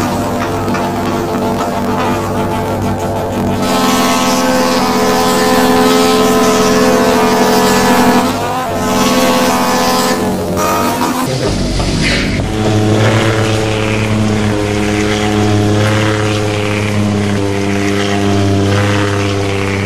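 From 0.0 to 11.26 s, planar audio read as interleaved: blocks of all-left-then-all-right samples are taken as alternating pairs, so each 23.22 ms block, which fits a 1024-sample buffer, plays twice at double speed. The sound sits an octave high, fluttering at 43.1 Hz.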